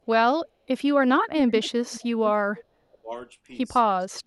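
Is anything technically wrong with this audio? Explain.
Yes, there are two. Echo leak at 1.37–1.71 s, 1.88–2.02 s and 2.56–2.64 s: a copy of the speech trailing about 0.45 s behind, fading from about 10 dB to 25 dB down, likely a far-end canceller letting loudspeaker pickup through. Speech suppressed in double talk at 2.89–3.12 s and 3.98–4.24 s: the speech dips by roughly 20–25 dB, likely the canceller ducking both talkers while they overlap.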